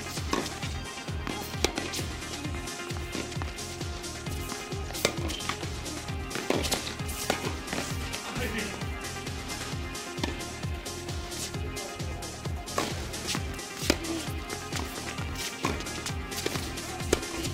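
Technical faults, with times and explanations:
0.93–16.88 s, clock drift buffer slips: a brief click recurs about every 1.14 s across this span, around fifteen in all, each a tiny jump where a block of roughly 30 samples goes missing or repeats. The likely cause is two devices on separate clocks disagreeing by something near 700 ppm, so the buffer between them drifts until it must slip. The strict, even spacing separates this from random dropouts or packet loss, which land irregularly.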